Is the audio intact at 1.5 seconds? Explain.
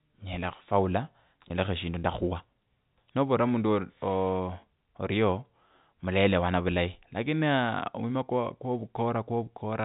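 No. From 1.48 to 1.50 s, 20 ms of audio is lost and bridged by pitch repetition: the last pitch period is looped, giving a brief buzzy hold. The waveform shows identical repeating cycles, and the spectrogram shows frozen, flat harmonic stripes.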